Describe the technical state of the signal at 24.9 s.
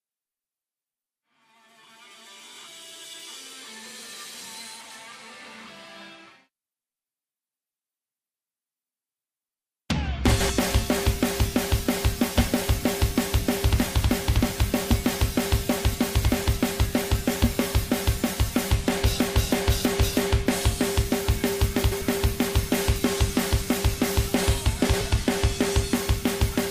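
At 24.9 s there are frames out of order, from 24.86 to 25.01 s: two adjacent blocks of about 70 ms were swapped, giving a garbled flutter.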